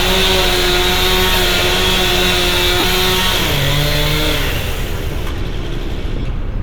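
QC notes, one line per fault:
2.79–2.84 s and 6.19–6.29 s, lost LE Audio frames: the LC3 decoder concealed each gap by replaying the last spectrum with random signs, smearing the sound into noise. The later gaps are scattered, with the longest run around 30 ms.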